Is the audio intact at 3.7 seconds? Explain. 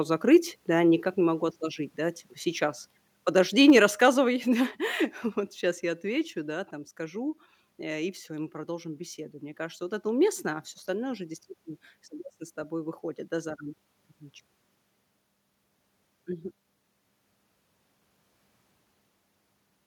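No. From 3.69 to 3.79 s the loudest part of the speech distorts with a harsh, crackly edge, most likely from microphone overload: the input level ran about 2 dB past what the converter could represent, so the peak tops were sliced off. Only a small share of samples are affected. On the waveform the peaks appear as flat plateaus. On a spectrogram, the clipping shows as a brief smear of added high-frequency energy across that tenth of a second.

At 3.70 s, right inside that distorted peak, the voice and the background both drop in level at once, by about 3 dB, and stay lower. That fits the microphone volume being stepped down, likely by the call software reacting to the overload and cutting the device's input gain in a single step. The waveform envelope shows an abrupt, uniform step down in amplitude. On a spectrogram, every band darkens slightly from that instant on.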